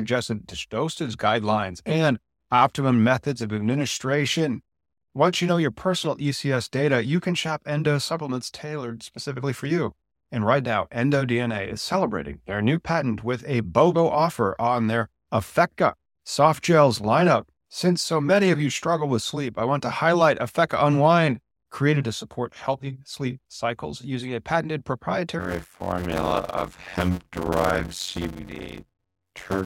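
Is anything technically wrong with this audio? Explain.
Yes, there is a block size mismatch (padded) from 25.39 s to the end. Short blocks, which fits 256 samples, are zero-padded, giving a buzz near 92 Hz and speech slowed to 0.533× with its timbre kept.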